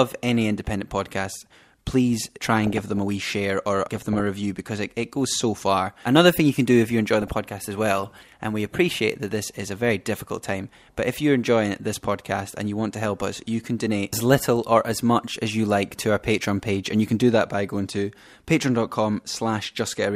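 A speech clip with DAB burbling in five short bursts: 2.20–2.98 s (ending just before "a wee share or"), 3.93–4.20 s, 7.22–7.50 s (between "do if you enjoy" and "as well and we"), 13.34–13.68 s (between "you want to help" and "donate as little or") and 15.82–16.04 s. Weak reception lets bit errors, around half a percent, slip past error correction into the MP2 stream. Corrupted samples put short blips of noise in single sub-bands, and corrupted scale factors make sub-bands leap in level for up to a frame, producing burbling over the speech.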